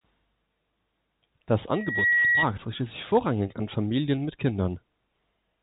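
Loudspeaker feedback squeal runs from 1.73 to 2.47 s, just before "richtet sich vorrangig an". The microphone re-amplifies its own loudspeaker until a 1.9 kHz tone builds up over about a third of a second and rides roughly 5 dB above the speech. It stays inside the telephone band, which stops near 3.8 kHz.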